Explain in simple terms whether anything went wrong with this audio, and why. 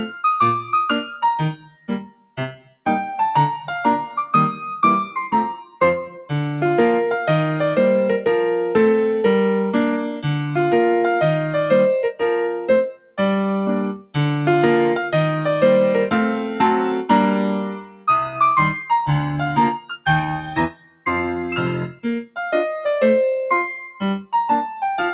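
A noise suppressor applied to music or sounds runs through the whole clip. This is a filter built to clean up speech on calls, and it treats steady tones, room ambience and lingering tails as if they were background noise. It keeps nudging them down, so the level rises and falls slightly all the time. Sharp attacks mostly get through, while held parts sag a little, giving a faint pumping, uneven feel.

Sound cut by the noise suppressor happens at 1.57–2.85 s, 12.91–13.19 s, 13.98–14.15 s, 17.74–18.07 s, 19.79–20.06 s, 20.7–21.06 s and 21.89–22.37 s. At these moments the same filter decided the sound was noise and pulled it down hard. The first stretch lasts about a second, and the rest are brief dips of a few tenths of a second. Sustained or fading sound drops sharply or has its decay cut short, so it seems to duck away and then return.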